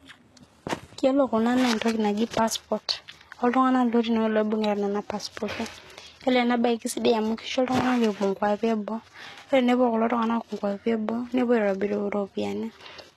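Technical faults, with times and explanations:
Throughout, low-bitrate audio saved at a high bitrate: nothing above 12.3 kHz, likely from a low-bitrate source whose losses the later high-bitrate MP3 cannot restore.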